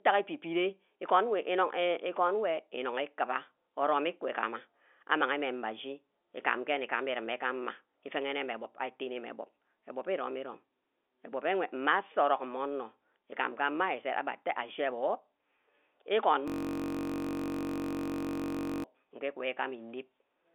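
A system hang loop runs from 16.48 s to 18.84 s. The driver or host stalled while the sound hardware kept replaying the same stretch of its ring buffer. A 21.33 ms slice of speech repeats exactly, about 110 times, at 46.9 Hz, which fits a 1024-sample buffer. Because the loop is so short, the speech gives way to a steady, flat buzz at that rate. Like the rest of the telephone-band audio, the buzz has nothing above about 3.8 kHz.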